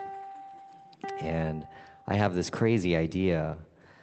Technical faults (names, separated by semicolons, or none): none